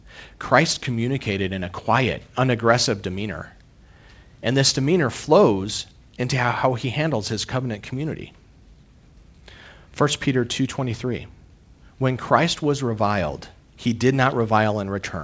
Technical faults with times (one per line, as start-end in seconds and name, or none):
none